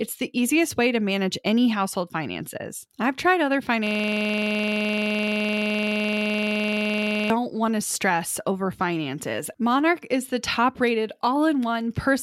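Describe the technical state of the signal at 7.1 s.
At 7.1 s the signal is inside a system hang loop running from 3.87 to 7.30 s. The host or driver stalled while the audio hardware kept replaying the same ring buffer, so one 42.67 ms slice of the speech repeats exactly, roughly 80 times. That length fits a 2048-sample buffer. The result is a hard, rattling stutter at 23.4 Hz that sits between a buzz and a machine-gun repeat, and it ends at 7.30 s.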